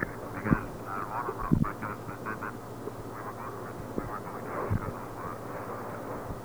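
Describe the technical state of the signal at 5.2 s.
At 5.2 s you're hearing the same grainy roughness that runs through the whole clip: low bit depth without dither. The audio was likely cut down to very few levels, something like 8 bits, by plain truncation with no noise added to smooth it. So the error tracks the signal itself, leaving a gritty distortion that shifts as the sound changes, sitting only around 25 dB under the signal, and the quietest parts break up or sputter.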